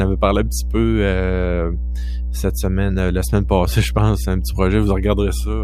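From the first moment to the end, the speech sits on a continuous mains hum, a steady low tone at 60 Hz. Its level is high, roughly 5 dB below the speech, so it stays clearly audible under every phrase and fills the pauses completely. The power line is coupling into the signal path, most plausibly through a ground loop between connected equipment or from a transformer mounted close to the audio circuitry.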